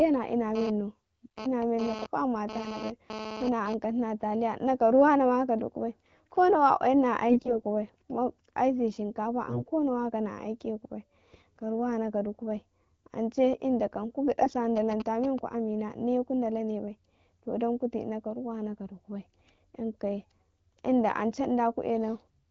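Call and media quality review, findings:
GSM phone buzz, 0.55–3.74 s. Hard raspy 217 Hz buzz, rich in harmonics, about 10 dB below speech, pulsing on and off. Nearby 2G phone in data transfer. Audio circuit rectifying its radio bursts.

AMR bit errors at 7.30–7.64 s, 9.45–9.68 s and 14.41–14.54 s. Hoarse, scratchy, gargly speech; pitch and level roughly kept. Weak link, heavy bit flips in AMR-WB frames at 12.65 kbit/s. Protected bits pass; excitation pulses misplaced.

GSM signalling bursts, 14.77–15.39 s. Galloping dit-dit-dit ticks and brief 217 Hz buzzes, roughly 10 dB under speech. Nearby 2G phone sending short signalling bursts. Rectified by audio circuitry.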